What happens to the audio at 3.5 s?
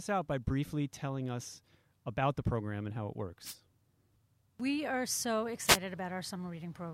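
A wireless microphone noise hit cuts across the speech from 3.44 to 3.55 s, just after "program and how it". For about a tenth of a second the analogue FM radio link fades as reflected signals cancel at the receiver, so receiver noise surges up as a swish of static. Unlike a digital dropout, which leaves silence or a hard gap, this fills the moment with hiss rather than emptying it.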